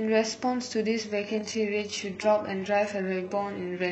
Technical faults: adaptive stream at a lower bitrate

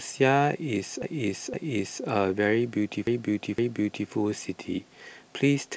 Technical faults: repeated buffer

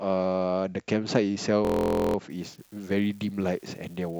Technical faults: system hang loop; unreliable data bit

